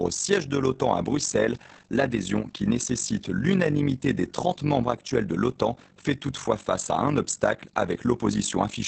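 From start to finish the speech carries Opus voice compression. The codec is running its SILK linear-prediction coder in wideband mode, so nothing survives above 8 kHz, and the excitation signal is quantised coarsely in 20 ms frames. The damage is plainly audible: voices sound muffled and hoarse with a slightly robotic edge, consistent with a low bitrate of about 12 kbps.

Overlapping that throughout is overlap-add ripple. The audio was split into windowed frames and rejoined with an overlap whose gains do not sum to a constant, so the level dips and swells by about 11 dB once per frame, at around 50 Hz. At that depth and rate it comes across as a rough tremolo, a fast flutter riding on every sustained sound.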